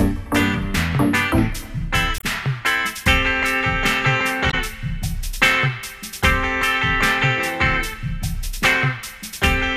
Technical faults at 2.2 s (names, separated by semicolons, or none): damaged data in a compressed stream